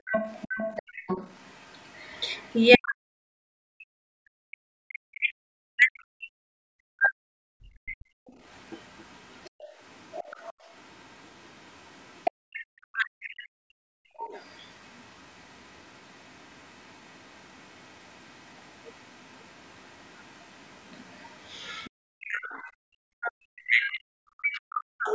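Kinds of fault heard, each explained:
Background gated by the echo canceller: the canceller clamped the microphone while the loudspeaker played, so room sound briefly drops by about 26 to 36 dB.
Other side's voice leaking through: the echo canceller likely left loudspeaker sound in the microphone, so a faint second voice, roughly 20 to 35 dB down, comes through in three stretches.
Speech suppressed in double talk: with both sides talking, the canceller likely turned its own talker down too, so speech dips by around 40 dB or cuts out in pieces.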